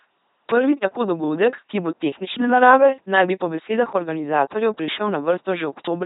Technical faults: LPC-10 vocoder

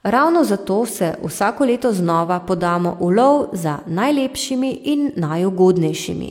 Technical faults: none

